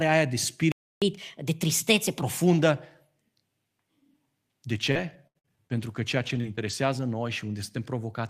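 At 0.72 s the speech cuts out in mid-flow and stays silent for about 300 ms, resuming at 1.02 s. This is a playback stall, likely caused by the player running dry of buffered data or its output thread being held up.

From 1.02 s to 2.22 s the speech runs fast, at 1.25 times normal speed, with pitch raised by roughly four semitones. This is catch-up at higher speed: the player resamples its backlog to recover the time lost in the stall, then returns to normal rate.

Between 4.91 s and 6.71 s the speech turns choppy and robotic. This is repeated packet loss with robotic sound. Eight gaps occur in this span, the longest 78 ms, totalling about 280 ms of missing audio. Each hole is patched by extending the preceding sound, which gives the stretch its robotic quality.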